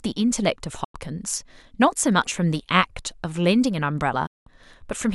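At 0.84 s and again at 4.26 s, the speech fades out within about 8 ms and goes silent: a digital broadcast dropout. The receiver muted on failed frames. The holes last 96 ms and 192 ms, which fits three and six lost frames.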